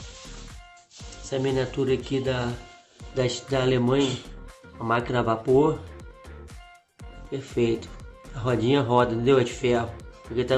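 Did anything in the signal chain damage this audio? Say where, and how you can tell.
No, nothing along the signal chain has audibly damaged this audio, and the signal stays continuous and intact throughout.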